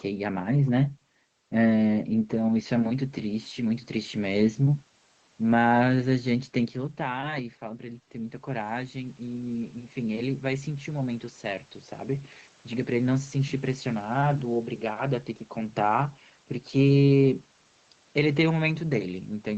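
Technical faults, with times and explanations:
6.08–11.71 s, automatic gain rising: after the input dropped about 11 dB, gain climbed about 7 dB over several seconds, swelling voice and room noise together.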